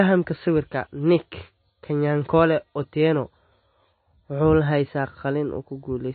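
Throughout the speech, everything above 4.6 kHz is missing, and the sound has a watery, swirling quality with smeared consonant attacks, plainly audible from start to finish. This is likely MP3 compression at a very low bitrate, consistent with roughly 24 kbps, where the encoder drops the treble and zeroes weak frequency lines. On a spectrogram the energy stops at a flat ceiling near 4.6 kHz, with patchy holes flickering on and off below it.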